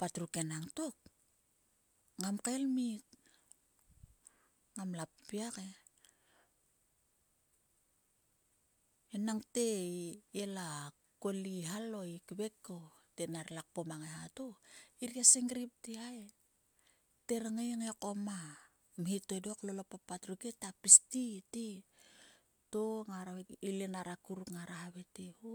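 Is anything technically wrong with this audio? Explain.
No, nothing technically wrong can be heard anywhere in this speech recording.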